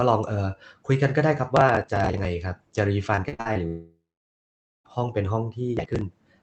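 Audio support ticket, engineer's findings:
Processor overload crackle, 1.57–2.25 s: crackle or gritty tearing over the speech. Dozens of consecutive missed deadlines, which fits buffers of roughly 10 ms, each skipped outright, leaving hard-edged micro-gaps. Processing thread starved. Clears when the load drops.

Processor overload crackle, 5.77–6.01 s: shorter burst of the same crackle, around fifteen skipped buffers. Same missed-deadline mechanism in the audio callback, same hard-edged skips.

Repeated packet loss (robotic sound), 3.15–3.57 s: choppy speech. Six gaps, longest 51 ms, about 180 ms missing in total. Each hole is patched by extending the last sound, so 43% of the span is synthetic fill. Jitter buffer or concealment stage on the Opus call path, which otherwise carries 8 kHz bandwidth.

Long network dropout, 3.67–4.86 s: speech stops. A fading buzz or hiss continues the last sound, then about 0.86 s of silence. 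Audio resumes at 4.86 s with roughly 1.2 s of content gone. Likely cause: total packet starvation over the network link, with the receiver concealing until it gives up.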